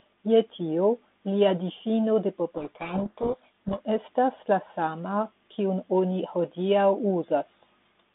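Speech over a narrow telephone band of roughly 200 Hz to 3.6 kHz, with light coding grain consistent with 32 kbit/s G.726, breaks up after "tio lia difino de" at 2.57 s: until 3.80 s, just before "estas la", the sound is swamped by harsh, rasping distortion. This is a codec payload misread. The two ends disagree on the bit order of the G.726 code words, so the decoder rebuilds wrong difference values until the normal packing returns.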